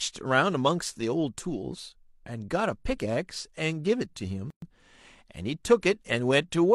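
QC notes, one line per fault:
4.50–4.62 s, gap at a join of encoded pieces: the speech drops into a gap of about 119 ms, its edges smeared by the codec so the silent part is shorter, then resumes exactly where it left off, as if nothing was lost. Two separately encoded pieces were joined without trimming, so the first piece's padded final frame and the second piece's encoder start-up delay both remain, leaving dead air in the middle of continuous speech.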